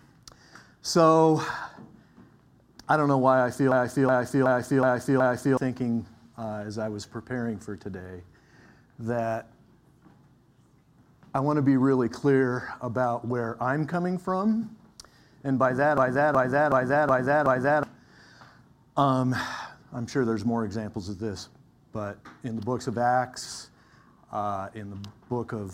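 At 3.72 s the audio suddenly starts repeating itself: a system hang loop, where the machine stalled but the sound hardware kept replaying its ring buffer. The same 372 ms chunk plays five times at about 2.7 repeats per second, a slow machine-gun stutter that lasts until 5.57 s, which fits a 16384-sample buffer. Roughly two seconds of real audio are lost. It happens again, identically, from 15.98 to 17.83 s.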